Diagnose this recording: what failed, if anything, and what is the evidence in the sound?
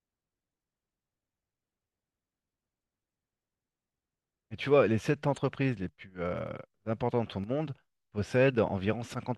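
The codec stage failed: a corrupt frame was decoded twice in this speech. Short blips occur at 5.36 s and 8.49 s. Each spans a couple of frames and peaks around -35 and -30 dBFS. Damaged bits were played anyway, misplacing energy in frequency.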